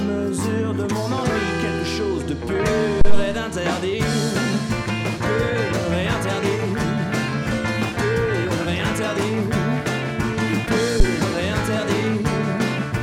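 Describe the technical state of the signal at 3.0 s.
A phantom power thump runs from 3.01 to 3.29 s: a supply switching on or off on a live input sends a voltage step through the coupling capacitors, producing a deep low thump peaking near -3 dBFS that dies away over roughly 62 ms.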